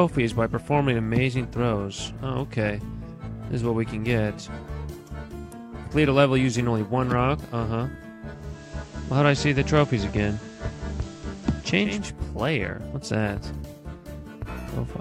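At 8.29 s the digital radio blends to analogue. The receiver loses its digital signal and cross-fades to the FM broadcast over 415 ms. Hiss rises, roughly 30 dB below the sound. Level shifts by about 3 dB. Digital returns at 12.14 s.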